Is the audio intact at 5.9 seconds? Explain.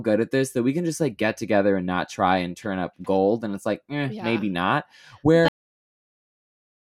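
No. A cut-off end begins at 5.48 s, so at 5.9 s the speech has already stopped and the clip holds only digital silence through to its close at 6.91 s. The final stretch of audio was never written out or played, so the signal ends partway through a sound rather than finishing naturally. Nothing fades or decays; the level drops straight from active speech to dead silence at the cut.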